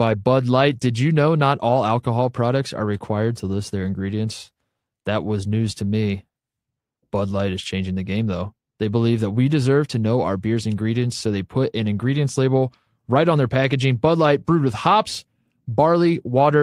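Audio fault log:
No faults are heard in this speech clip. There is nothing to log for it.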